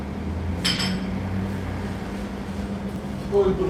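At 0.75 to 0.79 s there is a short concealed packet loss. About 20 ms of audio failed to arrive in time, and the receiver covered the gap by extending the preceding sound before blending back into the real signal over roughly another 20 ms. It is heard as a brief smear or wobble. On a spectrogram the fill shows smoothed, repeated harmonic bands or flat noise where finer detail should be. In the waveform, a short stretch of cycles repeats almost identically.

Overlapping chunks follow at 0.95, 1.96 and 2.96 s, one per second. The audio was handled in 1.0 s chunks, and each new chunk began about 6.5 ms before the previous one had finished, so that sliver plays twice at every join. The result is a click or stutter recurring like a metronome. A waveform shows a sudden discontinuity and a brief doubled segment at each join. On a spectrogram these appear as thin vertical broadband lines spaced about one second apart.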